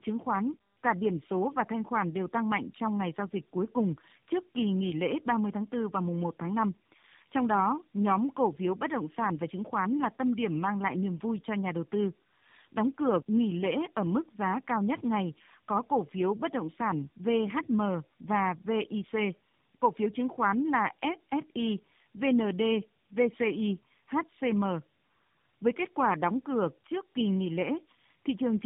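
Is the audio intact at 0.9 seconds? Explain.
No. Tandem speech coding affects the whole clip, including 0.9 s. The speech passed through three speech codecs in a row, G.726, G.729A and AMR-NB, each re-encoding the last one's degraded output. It sounds rough, muffled and warbly, with nothing above 3.7 kHz.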